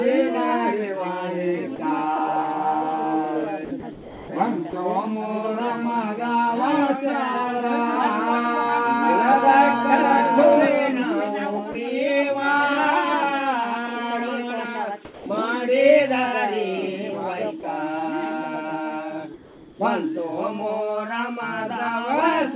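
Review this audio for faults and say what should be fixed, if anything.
Short holes where the sound vanishes into flat hiss at 1.76–1.79, 4.70–4.73, 11.72–11.75 and 17.60–17.63 s (each 30 ms), and a longer one at 15.05–15.26 s, where about 150 ms of real sound is lost. This is sound dropped by the voice detector: the sender likely judged quiet material to be background, stopped transmitting, and the receiver filled the gap with comfort noise until detection resumed. To prevent it, lower the detection threshold and add a longer hangover before transmission stops.

From 3.65 to 4.28 s the sound turns choppy, with about 450 ms of it swapped piecemeal for synthetic noise. This is sound chopped by the voice detector, likely caused by the sender's detector toggling between sending and muting more than once, each mute cutting away soft edges that the receiver then patched with comfort noise. To prevent it, apply hysteresis and a hangover so the detector cannot switch on and off within a single passage.

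Between 19.34 and 19.79 s the real background gives way to a smooth, featureless hiss about 2 dB quieter, sitting roughly 25 dB below the loud parts. This is comfort noise in place of the background, likely from discontinuous transmission: with nothing detected, the sender stopped sending audio and the receiver synthesised noise that only approximates the background's shape. The call path is G.711 A-law, which carries nothing above 4 kHz. To prevent it, disable discontinuous transmission or improve comfort-noise matching so the background stays continuous.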